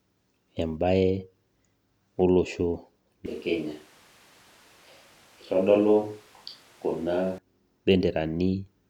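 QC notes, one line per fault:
3.26 to 7.38 s, switch to a distant microphone: the speech suddenly goes roomy and hollow, thins out in the low end and drops around 5 dB, with background noise rising to roughly 30 dB below the speech, then snaps back just as abruptly at 7.38 s. That abrupt change in tone and room sound is the giveaway that the close mic likely dropped out and a mic farther away, picking up more of the room and less of the voice, covered that stretch.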